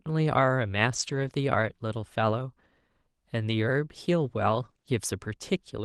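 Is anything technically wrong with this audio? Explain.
Yes, there are two packet-loss problems in this speech clip, which carries the mild coding noise and roughly 12 kHz top end of an Opus call link.

From 0.95 to 1.29 s there is a lost packet rebuilt from error correction. Nine separate packets went missing, but each following packet carried a low-bitrate backup copy, and the decoder played those copies instead. About 180 ms was rebuilt this way, so nothing drops out. That stretch just turns rougher and grainier than the audio around it.

From 4.65 to 4.87 s there is repeated packet loss, which gives a robotic sound. Packets kept failing to arrive, leaving four short holes, the longest 20 ms. The decoder patched about 80 ms by stretching the last sound forward, and a similar amount simply went missing, with concealment covering about 36% of the span. The result is a choppy sound with small pieces of the speech absent.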